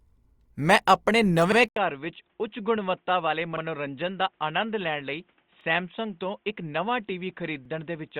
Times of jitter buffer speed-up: none

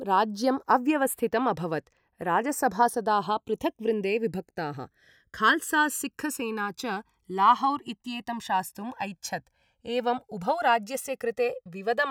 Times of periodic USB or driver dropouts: none

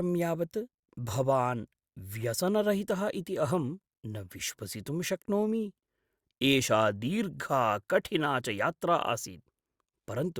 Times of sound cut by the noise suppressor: none

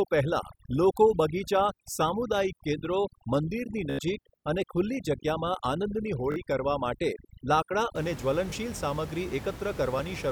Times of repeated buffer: 6.32-6.36, 8.50

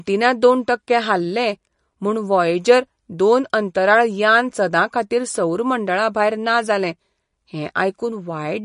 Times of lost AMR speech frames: none

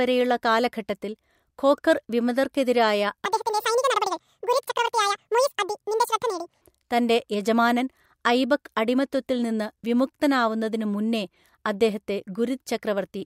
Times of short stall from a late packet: none

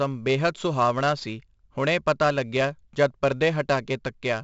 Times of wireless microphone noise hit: none

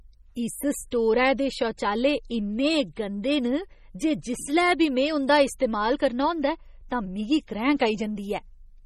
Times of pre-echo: 0.91, 5.59

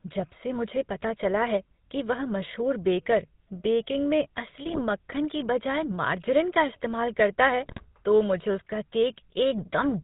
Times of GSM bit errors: 4.65-4.81, 7.64-7.80

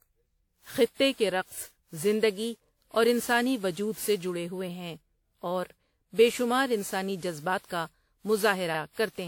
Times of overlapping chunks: 5.70-5.75

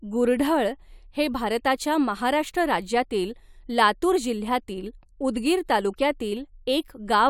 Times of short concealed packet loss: none

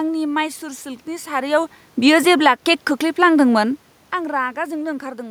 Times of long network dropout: none

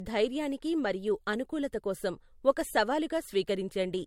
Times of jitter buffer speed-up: none

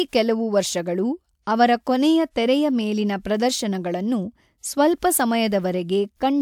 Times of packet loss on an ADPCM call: none

